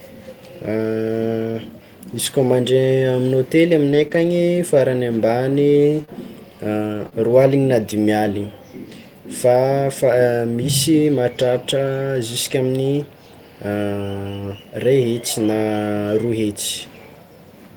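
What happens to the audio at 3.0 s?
At 3.0 s the speech falls within scattered short gaps, 2.25 to 7.95 s: about four tiny packet losses, each under roughly 20 ms, patched by extending the preceding sound. That leaves brief ticks and smears rather than one audible dropout.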